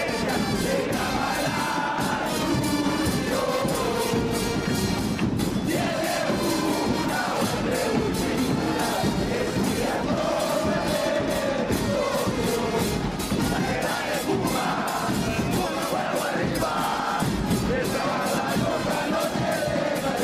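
Nothing here sounds broken, and there's no technical fault to point to anywhere in the recording.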